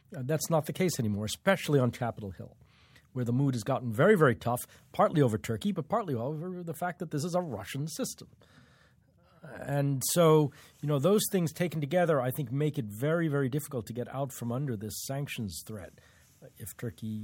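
A speech recording with nothing technically wrong to report.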